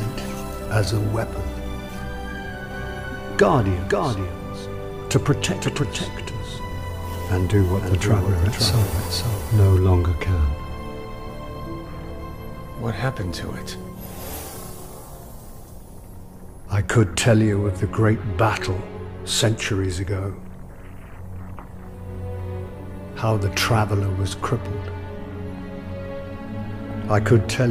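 From 2.71 s to 9.79 s a doubled audio track appears: a second, full-band copy of the sound trails the original by about half a second, roughly 5 dB quieter, with no decay or room colour, so everything seems to repeat as a flat echo. The likely cause is the signal being captured again through a slower path. On a spectrogram each event reappears as a fainter twin shifted right, and the waveform shows the copy starting and stopping abruptly.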